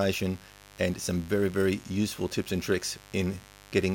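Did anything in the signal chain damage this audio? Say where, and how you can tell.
Yes. There is mains buzz in the analogue wiring, audible as a steady, raspy buzz under the speech for the whole clip, sitting roughly 25 dB below it. Switching spikes from a dimmer, rectifier or unshielded cable couple in twice per 50 Hz cycle, so the interference repeats 100 times a second. On a spectrogram it shows as unbroken horizontal lines at 50 Hz multiples climbing into the kilohertz range. The waveform shows a regular spiky ripple in the pauses.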